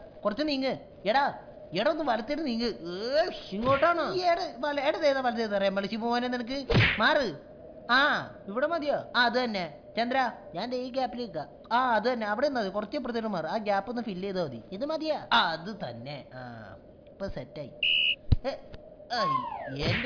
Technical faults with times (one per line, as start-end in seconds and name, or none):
none